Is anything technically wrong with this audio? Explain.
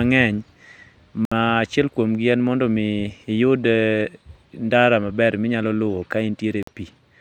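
Yes, the speech drops out twice, most likely from a Bluetooth stall: radio interference delays packets, the headphone buffer empties, and playback halts until retransmitted audio arrives. The first gap runs from 1.25 to 1.32 s, about 64 ms of silence, and the second from 6.63 to 6.68 s, about 47 ms. Each time the sound cuts abruptly to nothing, then resumes with no fade, leaving a brief hole in the speech.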